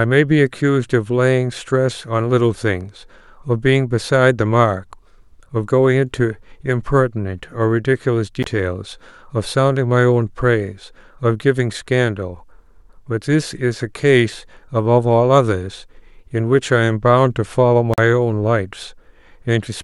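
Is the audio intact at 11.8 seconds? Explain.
Yes, the audio is intact at 11.8 seconds, with no fault at that moment.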